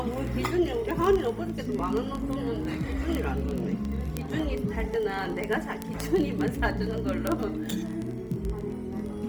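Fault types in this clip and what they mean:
Bluetooth LC3 compression: The upper spectrum sounds grainy and breathy rather than clean, with a hissy, noise-like sheen where fine detail should be. The damage is heavy throughout, yet the band still reaches about 20.2 kHz. The likely cause is Bluetooth LE Audio's LC3 codec in 10 ms frames at a low bitrate, which fits roughly 32 kbps. Starved of bits, it discards much of the high-frequency content and fills those gaps with synthetic noise.
Word clock ticks: A fast, steady stream of sharp ticks of uneven strength runs from 0.11 s to the end of the clip. They come about every 20 ms, some 400 in all, giving a buzzy, crackling texture over the sound. A digital link is being read by a device on its own unlocked clock, roughly 0.1% off the sender's. Each time the two clocks slip past each other, a single sample is dropped or repeated, and that glitch is heard as a tick.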